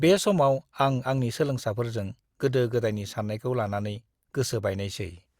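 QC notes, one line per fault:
No faults found in this speech recording. Nothing in it calls for a timed entry.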